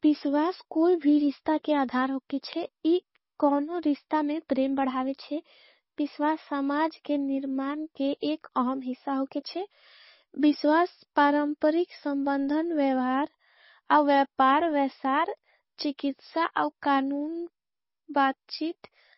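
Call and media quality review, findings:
Speech dull and band-limited throughout, nothing above roughly 5.6 kHz. Watery, swirly texture, heavy damage, s sounds chirpy and smeared. Likely MP3 compression: encoder short on bits cutting treble and dropping weak frequency lines frame to frame, which fits around 24 kbps.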